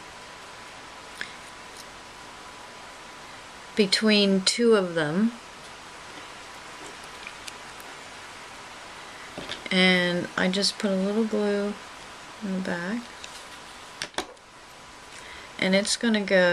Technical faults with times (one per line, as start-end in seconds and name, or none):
none